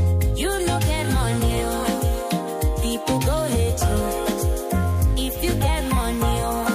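Mains buzz runs from 4.69 s to the end: switching spikes twice per 50 Hz cycle give a raspy buzz, about 30 dB down.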